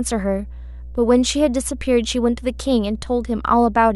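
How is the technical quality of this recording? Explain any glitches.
The recording is compromised by a continuous low-frequency fault that sits under the speech from start to finish.

Mains hum runs throughout the clip. Power-line current is leaking into the signal path, most likely through a ground loop or a transformer near the cabling, so a 60 Hz tone and a few of its low harmonics ride along with the speech. It is heard as a steady, buzzy drone only around 15 dB below the voice.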